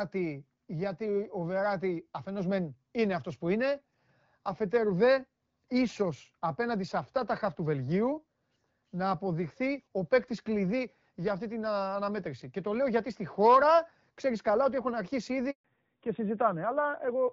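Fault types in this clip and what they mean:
Handover gap: the call switched networks and no speech frames arrived, so the audio drops out for 140 ms at 15.50 s, just after "καλά ότι έχουν αρχίσει".
Fallback to narrowband: after the switch the call left HD Voice for an older narrowband codec, so from 15.64 s nothing above 4 kHz remains and speech turns duller, rougher.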